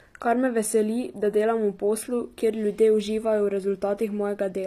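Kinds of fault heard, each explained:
HE-AAC compression: The speech sounds like a low-bitrate stream, likely HE-AAC at around 24 kbps, with plainly audible damage. The treble is rebuilt by copying lower bands upward rather than coded directly, so the s sounds turn gritty and lispy. Nothing comes through above 15.5 kHz.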